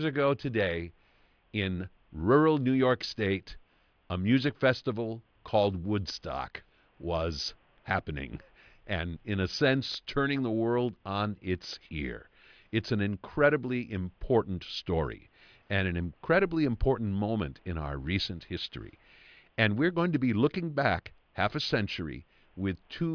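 No technical faults can be heard anywhere in this speech clip.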